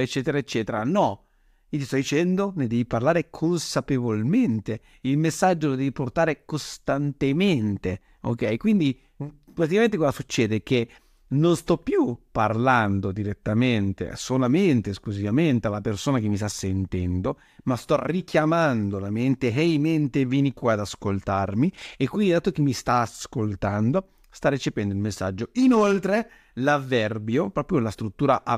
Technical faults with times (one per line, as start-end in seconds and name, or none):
none